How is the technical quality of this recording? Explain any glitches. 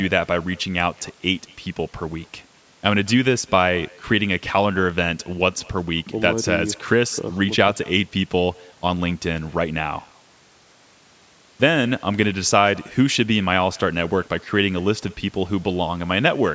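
The speech carries one fault from start to finish: echo with no canceller, though the call's microphone processing, band-limited to 8 kHz, is normal. The far end's loudspeaker feeds your voice back into their microphone, returning a faint copy about 28 dB down, roughly a fifth of a second late. Unlike room reverb, it is a distinct delayed repeat, not a smooth tail.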